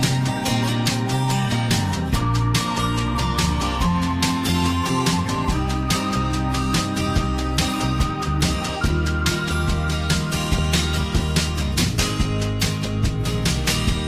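Nothing in this one trips any alarms; there's simply no technical fault to point to anywhere in it.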